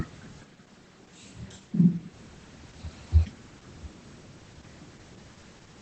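From start to finish the speech sounds muffled, a little hoarse and faintly robotic, with nothing above about 8 kHz. This is Opus voice compression in its SILK mode, coding a wideband signal at a low rate that fits roughly 12 kbps.

Between 0.46 and 2.11 s the voice turns suddenly roomy and hollow, thinner in the bass, with faint room noise well below the speech and no real change in level, then snaps back. The likely cause is a switch to a distant microphone.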